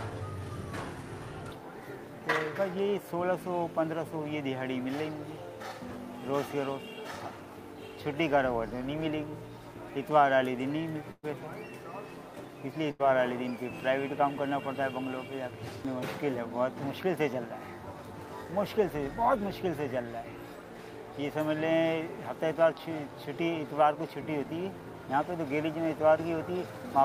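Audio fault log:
11.11 to 11.25 s and 12.91 to 13.01 s, burst of packet loss: several consecutive packets never arrived in time, so the receiver stretched the last sound and faded it, about 120 ms and 80 ms. The first fade reaches brief silence before the audio resumes with that stretch missing.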